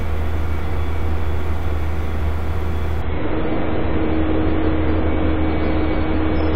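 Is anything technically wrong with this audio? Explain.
Yes. From 3.02 s to the end, the adaptive stream drops to a lower bitrate. The connection slowed, so the player switched to a leaner version of the sound. The change is sudden, with no gap. Nothing remains above 5.3 kHz, and coding artefacts grow. This fits a switch from 128 to 24 kbit/s MP3.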